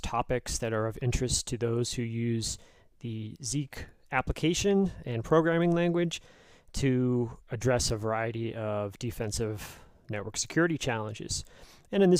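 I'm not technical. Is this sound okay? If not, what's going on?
Yes, this sound is okay. Nothing in it points to a technical problem that needs fixing.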